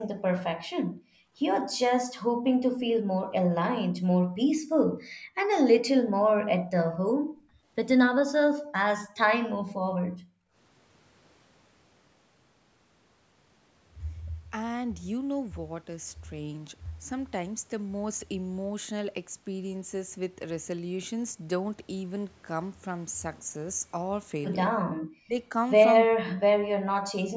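The echo canceller clamped the microphone while the far-end loudspeaker was playing, so the room sound beneath the speech was gated: it drops away, by as much as about 37 dB, at 0.18–1.35 s, 2.35–2.46 s, 3.06–3.10 s, 4.20–5.49 s, 6.04–8.73 s and 9.52–10.55 s, then returns.

Speech suppressed in double talk follows at 24.86–25.36 s and 26.05–27.17 s. Here the speech itself sinks by roughly 40 dB or breaks into pieces, likely because the canceller confused the near talker with loudspeaker echo while both sides spoke together.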